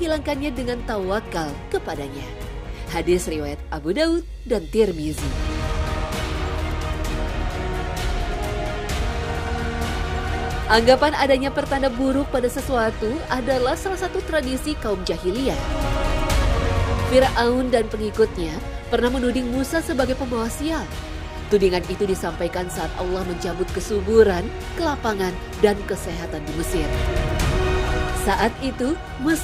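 Overlapping chunks: the audio was handled in 10 s pieces, each starting about 21 ms early, so a stretch replays as a stutter at 6.08, 16.10 and 26.13 s.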